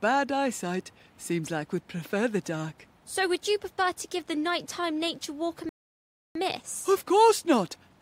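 A rebuffering stall interrupts the audio from 5.69 s to 6.35 s. The playback drops to complete silence for about 0.66 s, then picks up exactly where it broke off. The player had exhausted the audio it had already downloaded and had to wait for more data to arrive before continuing. Because the stream simply pauses rather than skipping ahead, no material is missing, but the gap adds 0.66 s to the running time.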